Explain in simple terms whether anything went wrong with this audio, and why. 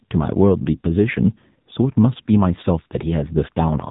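AMR narrowband mobile codec, from start to finish: this speech has been squeezed through the kind of encoding used on older mobile phone calls. The codec keeps only the lower part of the sound, cutting everything above about 3.8 kHz, so the voice loses its crisp, airy detail. It also rebuilds the voice from a simplified model with very little data, which is why the speech sounds noticeably buzzy and artificial, like a phone call.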